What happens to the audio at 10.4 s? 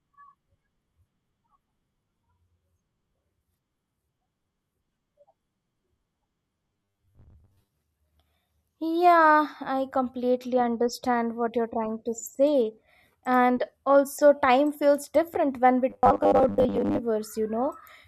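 Nothing goes wrong at 10.4 s; the speech carries on intact through that moment, with no dropout, click or distortion to be heard.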